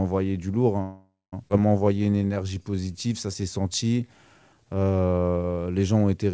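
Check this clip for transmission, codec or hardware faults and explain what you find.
Three transmission faults are audible in this speech clip, all typical of a packet-based call path.

Call audio freeze, 0.82 to 1.34 s, right after "du lourd". Packets likely stalled in transit and the jitter buffer ran dry. The receiver extends the last sound as a fading buzz for about half a second, ending in roughly 0.19 s of silence. Speech then resumes where it stopped, with nothing lost.

Skip ahead, 1.48 to 1.52 s. A stretch of about 0.4 s of speech was discarded, most probably as the buffer shed the backlog built up during the freeze. Playback jumps forward through a brief 15 ms patch. The two sides of the cut are joined almost directly, so part of the phrase is simply gone.

Jitter buffer slow-down, 1.84 to 4.85 s. The buffer was rebuilding its reserve by repeating single pitch periods and slivers of pauses. 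This adds 349 ms, and the speech plays at 89 percent speed. Pitch stays the same, but sounds are drawn out.

The G.722 call codec, with no content above 8 kHz, sits underneath all three faults.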